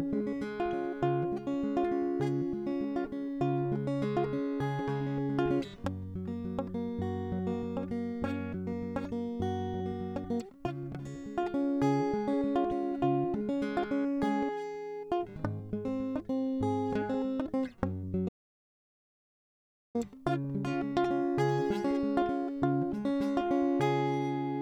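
An audio dropout to silence runs from 18.29 s to 19.95 s in this music: about 1.66 s of silence with no room tone. The input was likely lost while the recorder kept writing silence, so the music vanishes abruptly and returns mid-flow.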